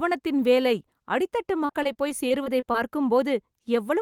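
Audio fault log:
1.65–2.76 s, repeated packet loss (robotic sound): right after "வேலை அடித்தட்டு", the speech turns choppy as ten short gaps follow one another, none longer than 35 ms. About 200 ms of sound goes missing over this stretch, and 186 ms of that is patched by carrying the last good fragment forward, covering 17% of the span. Those repeated scraps of stale waveform, butting against the real audio, give the buzzy, robotic texture.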